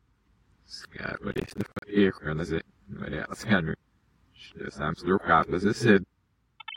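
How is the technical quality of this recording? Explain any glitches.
The recording has one clear technical fault, a burst of crackle about half a second long near the start.

Processor overload crackle runs from 1.32 to 1.82 s. The processor failed to finish its small audio buffers in time, apparently blocks of around 10 ms, and missed dozens of deadlines in quick succession. Each missed block was replaced with silence, so the sound is chopped by many tiny hard-edged dropouts. Together they form a gritty, tearing crackle over the audio that stops abruptly once the load clears.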